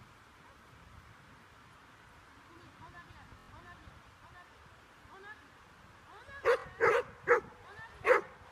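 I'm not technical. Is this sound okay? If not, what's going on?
No. There's Bluetooth stutter twice: from 3.30 to 3.49 s, and again from 6.60 to 6.64 s. The wireless link dropped bits of audio, so the player kept repeating its last tiny slice. That gives a quick buzzy stammer. Then it jumps ahead, skipping about 0.12 s and 0.05 s of sound.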